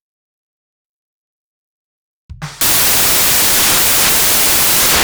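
At 2.61 s the music turns into loud, harsh broadband noise that lasts to the end: samples built from the wrong bytes, with misaligned or swapped bytes promoting the fast-changing low bits to the top. A spectrogram shows flat broadband energy, and the waveform becomes a dense block.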